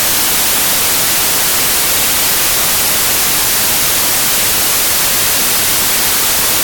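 From start to finish, samples built from the wrong bytes turn this speech into loud, harsh broadband noise: fast-changing low bits become each value's large part.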